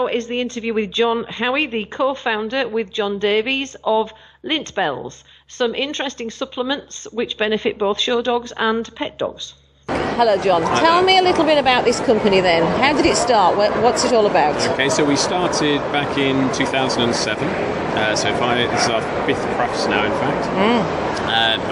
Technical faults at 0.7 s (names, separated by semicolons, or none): none